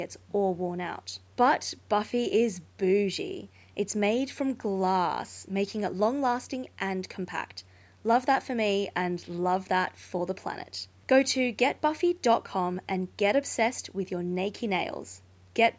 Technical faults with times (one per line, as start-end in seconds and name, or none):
none